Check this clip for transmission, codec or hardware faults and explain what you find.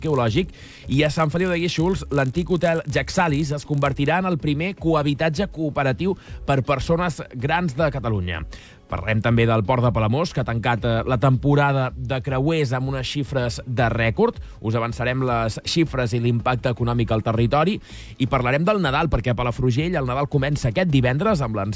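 One fault is present, in the first 4.08 s: a resampler restarted on every block. From 0.0 to 4.08 s, the 44.1 kHz to 16 kHz conversion appears to be reset at each 20 ms block, so every edge lacks neighbouring samples. The edge errors form a 50 Hz buzz that is present only with signal. Unlike random dropout clicks, it is perfectly periodic and vanishes in silence.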